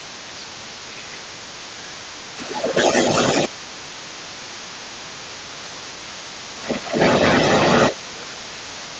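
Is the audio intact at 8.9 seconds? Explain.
No. From 1.23 s to the end of the clip, the echo canceller likely failed to remove the far side's loudspeaker sound from the microphone. This is other side's voice leaking through, and the second voice sits a little louder than the main talker at 8.9 s.

From 7.92 s to the end, both sides are talking at once, and the canceller likely could not separate them, so it suppressed speech during double talk. The near talker's voice dips by around 10 dB at its deepest and sounds ducked.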